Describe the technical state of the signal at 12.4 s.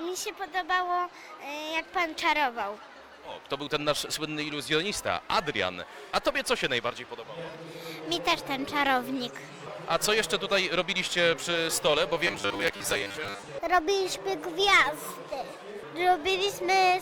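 Robotic sound from repeated short buffers covers 12.4 s, running from 12.27 to 13.44 s. The sound turns into a rigid, metallic buzz pitched at 100 Hz, which still loosely tracks the underlying audio. The likely cause is new audio arriving too slowly, so playback fills the gaps by looping a roughly 10 ms fragment. About half of the material in this stretch is repeated rather than fresh, and the real audio in between is skipped.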